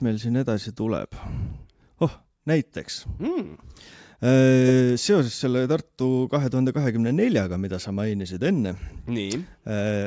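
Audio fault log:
No technical faults are audible anywhere in the speech signal.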